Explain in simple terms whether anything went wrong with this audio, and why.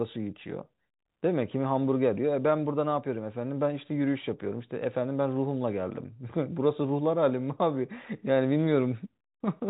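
Nothing went wrong with this recording; no glitches, dropouts or distortions can be heard anywhere in it. The speech has the narrow, slightly muffled quality of an ordinary landline call, because G.711 telephone coding carries nothing above about 4 kHz, and that is simply how this phone format sounds when it is working as intended.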